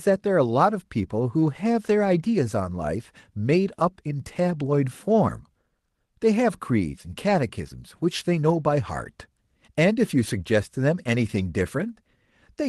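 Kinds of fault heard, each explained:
No faults can be heard in this speech. It has come through a call path, and its high end stops at 12 kHz, which points to the Opus codec running with its bandwidth set at that limit.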